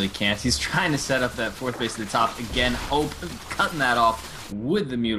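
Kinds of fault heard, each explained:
Damaged data in a compressed stream: a brief garbled blip at 3.67–3.72 s, where corrupted bytes threw the decoder off its frames until it regained sync.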